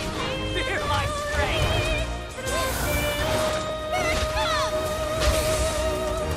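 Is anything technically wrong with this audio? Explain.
Yes. The audio was handled in 2.0-second chunks, and each new chunk began slightly before the previous one had finished, so the streams overlap at every join. These are overlapping chunks. At 1.68, 3.70 and 5.71 s, roughly 12 ms of sound is played a second time. Each repeat breaks the flow with a brief click or tiny stutter. Because the joins fall every two seconds, the glitch recurs at a steady, predictable rhythm.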